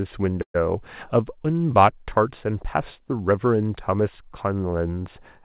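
At 0.42 s the speech stalls. The last sound lingers as a fading buzz or hiss, then 90 ms of silence, and at 0.56 s it resumes where it left off. This call audio freeze likely comes from delayed packets emptying the jitter buffer, adding a 122 ms gap.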